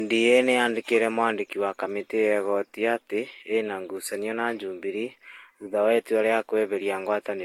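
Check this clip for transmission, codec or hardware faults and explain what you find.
The speech shows one fault across its full length: generation loss. The sound is swirly, smeared and hollow, attacks are blurred, and nothing is present above 16.7 kHz. The likely cause is repeated Vorbis decoding and re-encoding, around three passes, each re-quantising on a shifted frame grid so noise and spectral holes accumulate. A single low-bitrate encode would cut the top end similarly, but the damage here is heavier than a rate near 60 kbit/s would produce in one pass.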